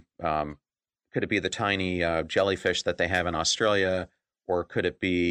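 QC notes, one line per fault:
0.00–3.33 s, channel delay (comb filtering): one channel runs late by roughly one sample, about 0.02 ms, so the mono sum puts its first notch near 20 kHz. The top end dulls gently instead of sounding hollow. The dulling stops at 3.33 s.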